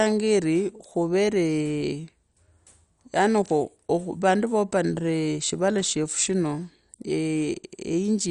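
Speech with MP2 compression throughout: dull, gurgling, granular texture, nothing above 11.2 kHz, likely a low rate near 48 kbps. Sub-band flicker distinguishes it from MP3's swirly pre-echo.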